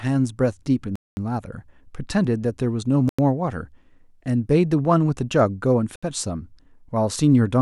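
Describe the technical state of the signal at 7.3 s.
At 7.3 s the signal is intact, with no audible dropout, distortion or other fault at that moment.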